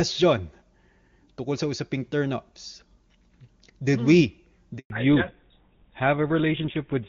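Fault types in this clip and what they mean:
handover gap: The call switched networks and no frames arrived. The speech dies away and stays silent for 120 ms, from 4.78 to 4.90 s.
fallback to narrowband: From 4.90 s the call drops from HD Voice to an older narrowband codec, likely GSM full rate. Nothing remains above 4 kHz, so speech sounds duller.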